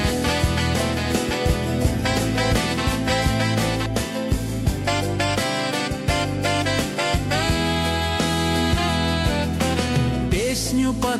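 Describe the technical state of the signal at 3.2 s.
At 3.2 s a doubled audio track is playing. It runs from the start to 3.86 s, where the copy cuts off abruptly. A second full-band copy trails about a second behind at roughly equal level, with no decay or room colour. It is likely a slower second capture path.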